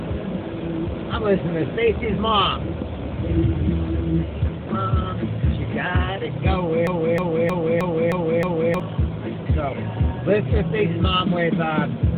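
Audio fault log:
6.87–8.80 s, broken-record loop: a single 0.31 s fragment plays six times back to back, each copy identical, and the material that belonged in those two seconds never arrives. The likely cause is a stalled player, encoder or stream that kept resending its last held fragment. Unlike an echo or reverb tail, the repeats do not decay or overlap; unlike a stutter, the loop is long and perfectly regular.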